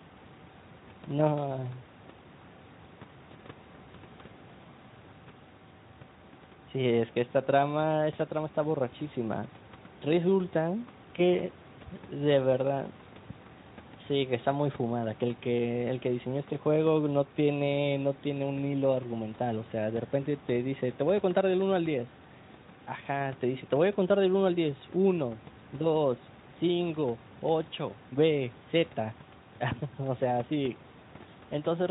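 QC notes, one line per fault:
No faults to note in this clip.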